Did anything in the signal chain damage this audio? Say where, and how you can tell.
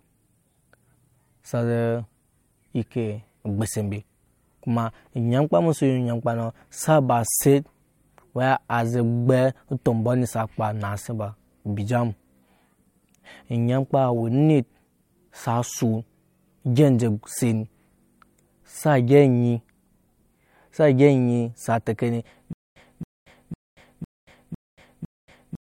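Yes. From 22.53 s to the end, right after "sa teke", the speech turns into a stutter with silent gaps: the same 272 ms fragment repeats six times at a steady 504 ms period, with about 232 ms of digital silence between repeats. That points to the playback or streaming buffer, which likely stalled and, on each retry, replayed its last fragment before running empty. The speech that should have filled that time is lost.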